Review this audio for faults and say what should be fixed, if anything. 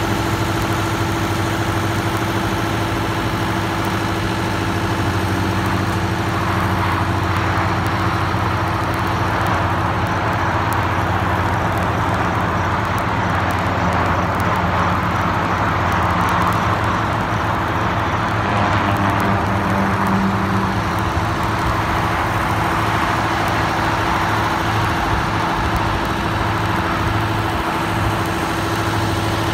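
Word clock ticks run from 0.12 s to 29.52 s. They come roughly every 30 ms, so there are about a thousand of them. The receiving device runs on its own clock, drifting around 700 ppm from the sender. At each slip, a single sample is dropped or repeated. To prevent it, lock the receiver to the incoming digital signal or to a shared word clock.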